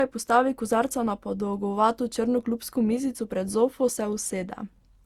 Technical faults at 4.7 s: generation loss

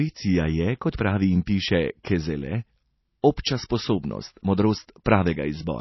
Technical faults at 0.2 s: MP3 compression

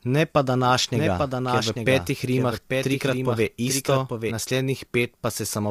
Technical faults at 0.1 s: low-delay AAC compression

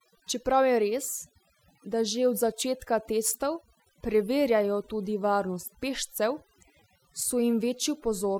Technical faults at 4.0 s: overdone noise removal

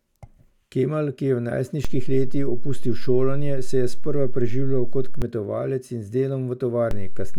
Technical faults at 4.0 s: DC step

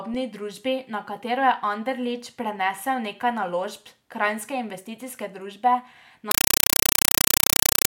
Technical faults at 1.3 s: none

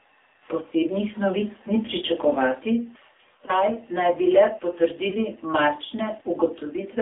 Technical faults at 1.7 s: AMR narrowband mobile codec

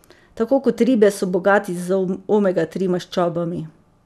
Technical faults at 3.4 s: none

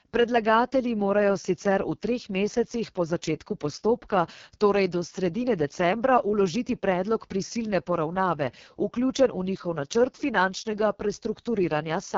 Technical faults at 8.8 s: AMR wideband (HD Voice) codec

